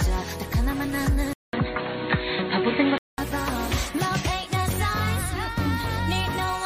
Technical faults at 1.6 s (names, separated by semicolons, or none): input switched to a poorer device